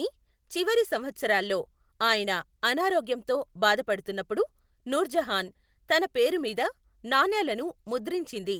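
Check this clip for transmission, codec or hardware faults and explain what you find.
Two related timing faults are present, both caused by mismatched clocks.

Clock drift between sender and receiver runs through the whole clip. The sender's clock is about 5 percent fast. Audio arrives quicker than it is played, so the receiver's buffer keeps filling. Small timing hiccups recur all through the clip, at uneven intervals.

Repeated timing corrections occur from 0.05 s to 8.46 s. To stop the buffer overflowing, the receiver keeps cutting out short pieces. This matches a sender running at 105 percent speed. The cuts are small and unevenly spaced. If heard at all, they come across as slight hiccups or an unsteady tempo.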